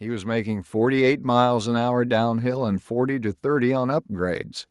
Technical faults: automatic gain rising

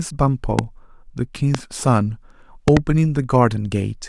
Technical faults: loud pop

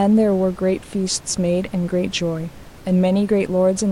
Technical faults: none

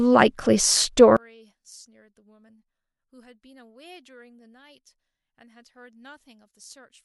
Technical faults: one channel inverted

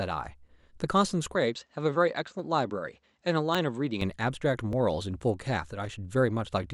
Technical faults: dropped buffer (overrun); input switched to a poorer device

